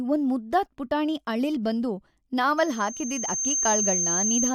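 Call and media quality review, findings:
Loudspeaker feedback squeal, 2.57 s to end of clip. Single 6.3 kHz tone swells over about a second, then sits above the speech. Mic picking up its own loudspeaker.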